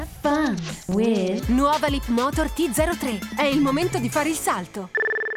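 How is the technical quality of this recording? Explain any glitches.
There is one glitch, a block of digital silence at 0.92 s. For about 2.7 ms the signal drops straight to zero and then resumes, with no fade on either side. That is the mark of an output buffer that was not filled in time, and the gap's length fits a 128-sample buffer. Because the hole is so short, it is heard not as a gap but as a single sharp tick where the waveform jumps to zero and back.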